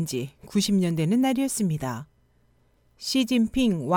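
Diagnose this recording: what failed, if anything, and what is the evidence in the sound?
The converter failed: sample clock jitter runs throughout this speech. A roughness rides on loud, bright passages, a few tens of dB down, and disappears in pauses, unlike steady background hiss. A clock wandering by microseconds mistimes samples most where the waveform changes fastest.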